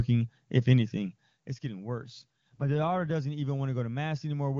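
A speech clip carried over AMR wideband (HD Voice). From 2.02 s to 3.14 s there is an AMR rate drop. The voice turns rough and synthetic there, with no gap and no loss of band. That fits the link falling from 23.85 to about 8.85 kbit/s. The spare bits go to error protection. Clarity returns when the higher rate comes back.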